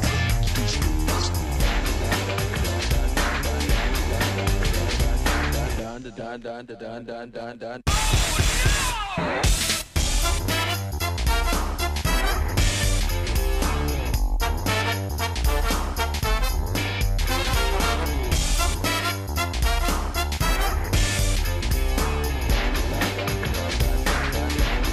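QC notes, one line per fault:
No technical faults heard.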